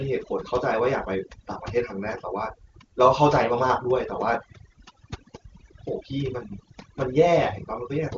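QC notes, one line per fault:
Throughout: overdone noise removal, noise reduction set too hard gates bands near its noise estimate, leaving a lowered background breaking up into twinkling specks; AMR-WB wideband path intact, nothing above roughly 7 kHz.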